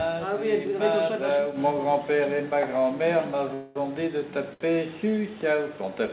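At 3.54 s the audio stops moving forward and the last sound is drawn out as a fading buzz or hiss for about 0.21 s, until 3.77 s, with no drop to silence. When it resumes, it picks up exactly where it left off, so nothing is lost but everything after it runs about 0.21 s late. This is a call audio freeze, likely caused by packets being held up in transit so the jitter buffer emptied and the receiver had to fill the gap itself. A shorter hitch follows at 4.53 s: a sound is held too long, with a slight buzz or dip, for 70 ms until 4.62 s, then the audio continues from the same place. That is a short stall from a late packet, where one packet missed its playout time and the receiver stretched the preceding sound to cover it, adding another 70 ms of delay. Throughout, the sound carries the narrowband character of a G.711 mu-law call path at 64 kbps, with nothing above 4 kHz.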